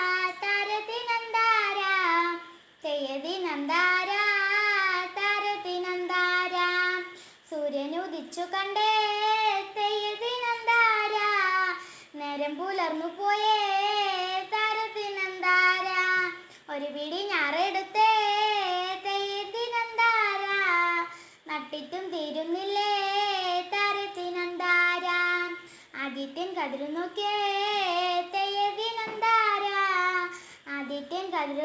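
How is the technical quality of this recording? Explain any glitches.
There's one glitch worth pointing out. The audio came over a call link that tops out around 8 kHz, which fits a wideband codec like G.722.

At about 15.24 to 15.27 s there's a short concealed packet loss. Roughly 20 ms of audio never reached the decoder in time, so the receiver improvised about 12 ms of stand-in sound by extending what came just before, then crossfaded back into the real signal. You hear it as a quick smear or wobble, and a brief sound in that spot can simply drop out.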